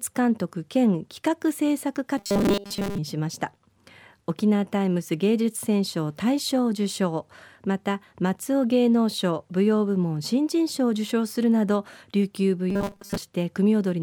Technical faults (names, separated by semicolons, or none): robotic sound from repeated short buffers